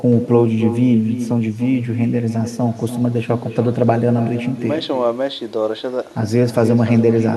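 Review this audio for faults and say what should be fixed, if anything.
There's echo with no canceller running through the whole speech clip: every phrase comes back roughly a third of a second later, about 10 dB quieter and thinner. The far end's loudspeaker is feeding their microphone, and nothing strips it out. Fix it by enabling acoustic echo cancellation on the far-end device, or having them use a headset.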